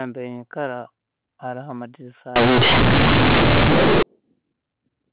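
Just after "haroho amairisa", from 2.36 to 4.03 s, you get companded audio read as linear. The A-law telephone bytes sound like they're being played straight out as plain 8-bit samples, with no expansion. Every sign change flings the waveform across about half its range, so the quiet stretches come out as loud as the peaks. It's harsh and buzzy, with heavy noise filling the pauses, sitting on top of the usual G.711 telephone band that tops out at 4 kHz.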